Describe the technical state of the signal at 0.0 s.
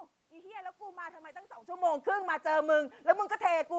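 At 0.0 s the speech signal is intact, with no technical fault present at that moment.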